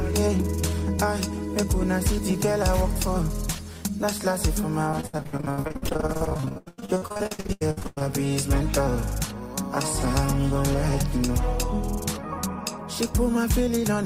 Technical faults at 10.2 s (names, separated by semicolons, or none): none